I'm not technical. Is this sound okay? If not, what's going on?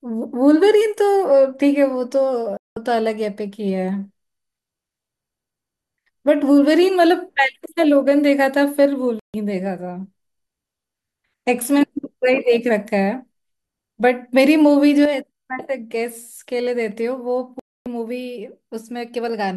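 No. There are two kinds of problem.

The first is a digital broadcast dropout, which happens three times. The sound suddenly goes silent at 2.57 s, 9.19 s and 17.59 s, for roughly a fifth, a seventh and a quarter of a second. The receiver lost the signal and muted itself until it came back. Whatever was said in those gaps is gone.

The second is one channel dropping out. From 15.05 s to the end, the speech suddenly becomes noticeably quieter. The likely cause is that one of the two stereo sides stopped working, leaving only the other side to carry the sound.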